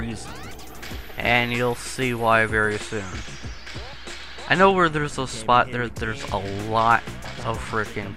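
Nothing in the audio gives any technical trouble, so there's no fault to point to here.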